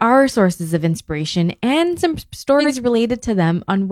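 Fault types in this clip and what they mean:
frames out of order: Just after "of inspiration and some", 2.59 to 2.71 s plays with two neighbouring single frames of about 46 ms swapped, causing a garbled flutter. The spectrogram shows a misplaced block.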